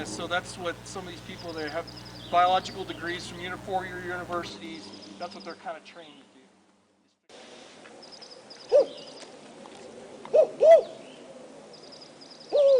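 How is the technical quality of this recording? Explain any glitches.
The recording has one clear technical problem: mains buzz from the start until 4.5 s, then it stops. Sharp switching spikes from a dimmer, rectifier or unshielded cable enter the signal 120 times a second on a 60 Hz supply, stacking harmonics into the kilohertz range. Sitting about 20 dB below the sound, it reads as a raspy, edgy buzz rather than the smooth, low tone of plain hum.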